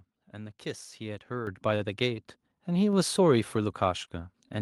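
Microphone volume stepped up at 1.47 s: the call software judged the input too quiet and raised the microphone's gain in a single step of about 8 dB. Because the change happens at the device, before anything else in the chain, the voice and the background noise jump louder together and stay at the new level. There is no fade or ramp, just an abrupt lift.

A short stall from a late packet follows between 1.75 and 1.83 s. A packet did not arrive in time, so the jitter buffer emptied and the receiver had nothing new to play. Instead of leaving a gap, it stretched the last sound for 48 ms until the packet turned up, then carried on from where it left off. No speech is lost, but one sound is held unnaturally long, with a slight buzz or dip. Everything after it plays about 48 ms later.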